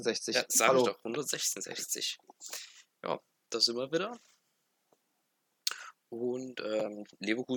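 No dropouts, clipping, glitches or other transport or processing defects occur anywhere in the audio.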